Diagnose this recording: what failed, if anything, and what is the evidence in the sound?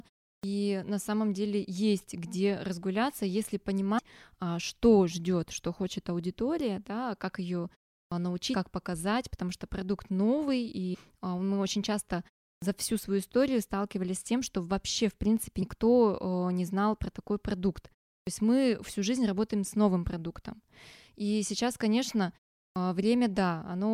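The output device dozes off during silences of roughly 0.35 to 0.4 s and takes time to wake, giving a clipped start after a pause. At 0.37, 8.06, 12.55, 18.21 and 22.69 s, about 60 to 70 ms of speech onset is swallowed, so words snap in abruptly.

At the codec or storage stage, compressed frames are skipped. Whole 24 ms frames go missing or are rejected, so the audio jumps ahead by roughly 70 to 150 ms. This happens at 3.97 s before "а что ждет что", at 8.53 s before "показать потому что продукт", at 10.93 s, and at 15.61 s after "что вообще в принципе".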